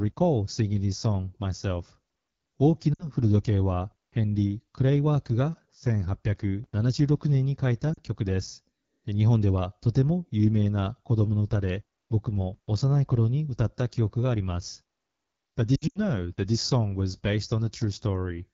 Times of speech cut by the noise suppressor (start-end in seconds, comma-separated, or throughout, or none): none